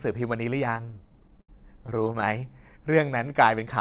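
Repeated stalls (stutter) from 0.74 to 2.24 s: packets arrived late, the jitter buffer kept emptying, and the receiver stretched the last sound across many short gaps, up to 78 ms. Nothing is lost, but about a quarter of that stretch is filler, so the speech drags and stutters.

Jitter buffer slow-down from 3.05 to 3.45 s: rebuilding its reserve, the receiver repeated pitch periods, adding 52 ms. The speech runs at 89% speed without changing pitch, through a call path band-limited to 4 kHz.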